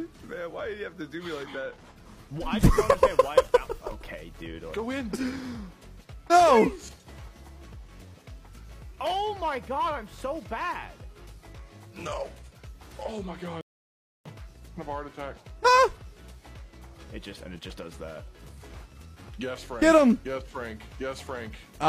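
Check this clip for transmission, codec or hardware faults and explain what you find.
One fault is present: a rebuffering stall from 13.61 to 14.26 s. The player ran out of downloaded audio and paused until more data arrived. The sound drops to silence for about 0.64 s. It then resumes exactly where it stopped, with nothing skipped.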